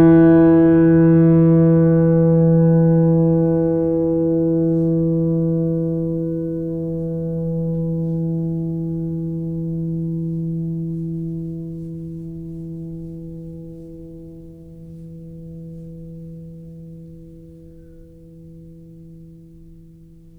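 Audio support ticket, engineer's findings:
No fault found on the music clip. Nothing to escalate; ticket can close.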